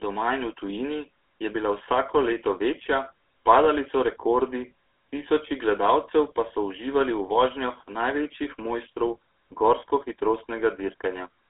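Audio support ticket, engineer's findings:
Buzzy, gravelly speech throughout, band roughly 250 Hz to 3.6 kHz. Sounds like GSM full-rate codec: coarse pulse excitation roughening the voice, fits a 13 kbps path.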